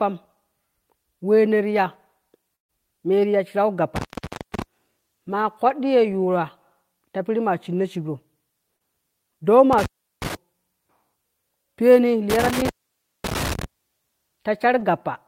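At 2.55 to 2.71 s, just before "meti ya shirau", a burst of packet loss drops about 140 ms. The last sound is stretched and fades, then speech jumps ahead with no crackle.

Intermittent contact follows at 3.96 to 4.62 s, right after "meti ya shirau", then at 9.73 to 10.35 s and 12.30 to 13.64 s. Each time a loose connection opens for about 0.49, 0.36 and 0.55 s, cutting to faint hiss between crackles, unlike the clean, smoothed edges of lost packets.

At 8.77 to 8.82 s, short concealed packet loss fills about 32 ms with continued sound, giving a brief smear rather than an audible gap.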